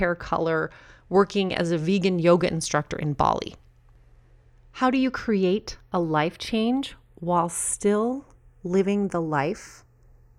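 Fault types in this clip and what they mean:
Channels drifting apart: the two channels of this speech were captured on devices running from separate clocks, roughly 20 parts per million apart, so the delay between them creeps steadily across the whole clip and ends at only a fraction of a millisecond. Summed to mono, the resulting comb notches glide slowly through the spectrum, giving a drawn-out flanging. A fixed inter-channel offset would instead leave the notches parked, colouring the tone without any sense of motion.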